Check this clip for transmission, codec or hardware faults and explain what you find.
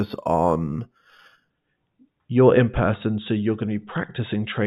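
One fault is present. From 0.0 to 1.5 s there is imaging from linear upsampling, which fits a rise from 8 kHz to 48 kHz by straight-line interpolation. A faint mirrored copy sits between 4 and 8 kHz, around 35 dB down, and adds a light metallic shimmer to sibilants. Unlike aliasing, the stray energy mirrors above the band edge rather than folding down into it.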